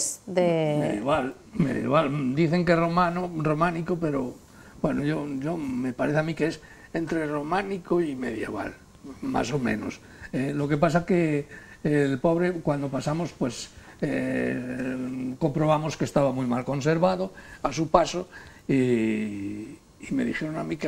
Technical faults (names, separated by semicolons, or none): none